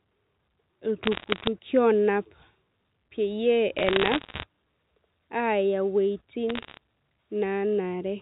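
You get three bursts of bit errors on a digital phone line, at 1.04 to 1.47 s, 3.78 to 4.44 s and 6.49 to 6.77 s. Flipped bits, well under one percent of them, knock single samples out of place on the 8 kHz telephone-coded speech, so each burst crackles with sharp ticks.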